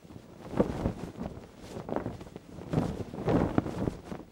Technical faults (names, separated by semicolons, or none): none